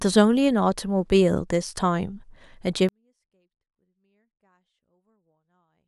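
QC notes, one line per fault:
2.89–5.87 s: 24-bit alignment error (too quiet). The speech stays clean but falls about 48 dB at once and is barely audible to the end, because 24-bit samples sitting in the low bytes of 32-bit words are read as full 32-bit values.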